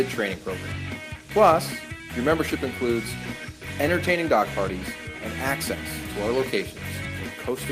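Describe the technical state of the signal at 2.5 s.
At 2.5 s the signal is intact, with no audible fault at that moment.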